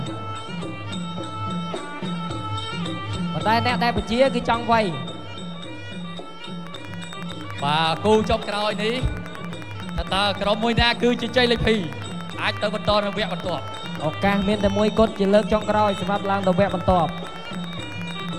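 A train of clicks starts at 6.67 s and runs to 18.3 s, near the end of the sound. The clicks arrive about 10.8 times per second at a steady, regular pace. That adds up to roughly 150 clicks. Each one has much the same sharp shape and peaks a few decibels above the sound beneath it. They tick through quiet gaps as well as louder passages. The likely cause is interference from nearby equipment or a faulty connection or power supply.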